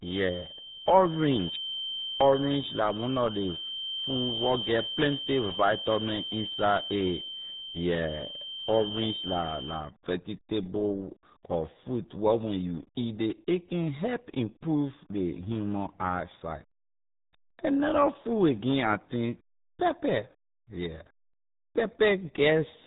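From 0 to 9.93 s, a thin, steady whistle near 3.1 kHz sits well below the speech and swells and fades slowly. It is likely a feedback whistle from a speaker-to-microphone loop held at the edge of oscillation.

Throughout, the speech is muffled and gargly, with nothing above 3.8 kHz. This heavy damage fits the RealAudio 14.4 codec at 8 kbit/s.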